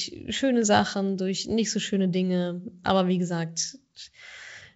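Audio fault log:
Nothing in this speech clip stood out on listening.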